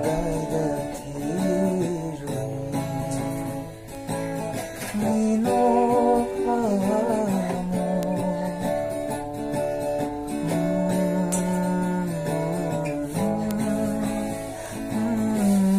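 A single bit flipped in memory or on a digital link, five times, leaving bit error spikes at 3.95, 8.03, 11.32, 13.51 and 14.66 s. Each corrupted value leaps by a power of two and snaps straight back, so each is heard as one sharp, broadband tick with no relation to the surrounding sound. The peaks reach about -17 dBFS at the first and last, about -11 dBFS at 8.03 s, where the click points to two adjacent samples, and about -5 dBFS at 11.32 and 13.51 s.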